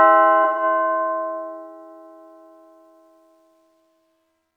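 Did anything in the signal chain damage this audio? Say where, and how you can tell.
Yes. The codec stage dropped data and the decoder had to cover for it: AAC frame loss with concealment, from 0.44 to 0.63 s. About 128 ms of coded audio never arrived, which fits roughly three lost AAC frames. The decoder rebuilt the gap from the last good spectrum rather than the real signal, so the sound turns smeared, noisy or phasey there. The detail of the sound dissolves for that stretch until clean decoding resumes.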